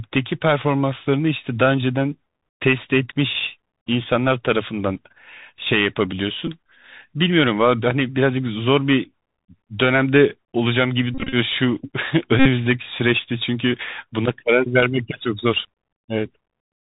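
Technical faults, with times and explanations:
Throughout, Bluetooth CVSD headset codec. The speech is coded as one up-or-down bit per sample at 64 kHz with an adapting step, so nothing above 4 kHz survives. Loud high sounds outrun the step, s sounds turn scratchy, and granular hiss sits underneath.
2.25, 6.47, 11.15 to 11.35 and 12.39 to 12.47, Bluetooth headset packet repeated. Lost voice packets were replaced by the previous packet's bits. The first two are brief, 3 and 2 packets lost. The later spans buzz near 267 Hz from the 3.75 ms repeat, with runs up to about 40 ms at 11.15.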